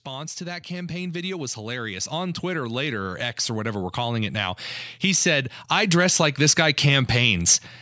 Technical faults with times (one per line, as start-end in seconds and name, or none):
0.05-7.46 automatic gain rising